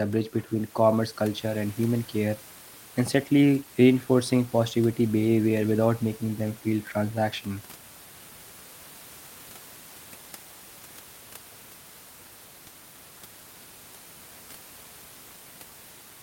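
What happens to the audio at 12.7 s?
Nothing goes wrong at 12.7 s: the speech carries on intact, with only the room's own background noise sitting about 22 dB below it.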